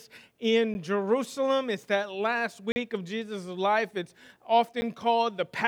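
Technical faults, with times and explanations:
0.74 s, 2.72–2.76 s and 4.81 s, block of digital silence: the sound drops straight to silence and back with no fade, most likely because the output buffer wasn't filled in time. The two 10 ms gaps come across as ticks, and the 40 ms one as a short hole.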